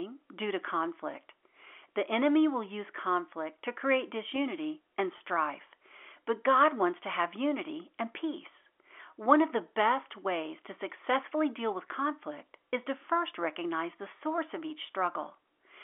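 At 5.18 to 5.20 s, packet loss with pitch repetition fills a 20 ms gap by looping the last pitch period. It sounds like a buzzy hold and shows as identical repeated waveform cycles.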